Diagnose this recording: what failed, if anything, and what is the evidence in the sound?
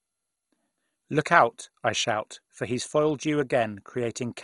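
The codec stage failed. The speech is dull and gurgling throughout, with a coarse, granular roughness. Nothing survives above 11.2 kHz. Upper detail flickers in and out as bands switch on and off. This is likely MP2 compression, with MPEG Layer II starving its 32 sub-bands of bits. Top bands get dropped and the rest are quantised coarsely. The damage is heavy, which fits a rate near 56 kbps.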